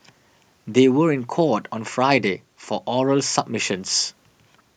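No technical faults can be heard anywhere in this speech recording, and the signal holds steady throughout.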